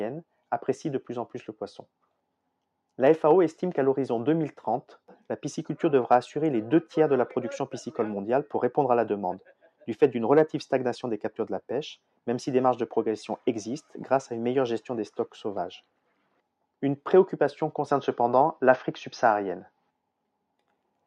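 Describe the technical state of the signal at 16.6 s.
At 16.6 s the signal is intact, with no dropout, distortion, glitch or other fault audible at that point.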